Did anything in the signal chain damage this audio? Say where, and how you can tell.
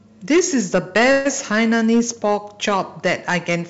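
Yes. Harsh crackle rides the loudest speech peaks all the way through. This is hard clipping at a gain or converter stage: the signal was driven about 8 dB past full scale, so a few percent of samples are sliced flat, adding high harmonics.

From 1.12 to 1.27 s the speech stalls into a fading buzz, then resumes without losing anything. This call audio freeze likely comes from packets delayed on the network: the jitter buffer ran dry and filled about 132 ms. That gap sits inside a G.722 call path that stops at 8 kHz.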